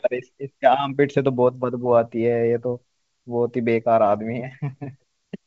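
No technical faults can be heard in this speech clip. It has the wideband telephone sound of G.722 coding, reaching up to about 7 kHz, with at most a faint trace of the coding in the upper band.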